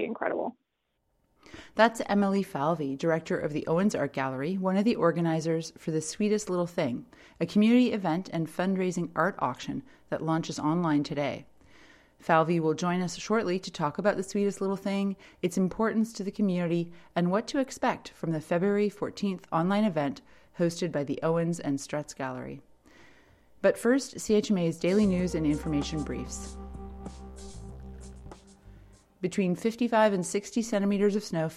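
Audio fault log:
Nothing in this one calls for a log entry; I listened all the way along and found no faults to note.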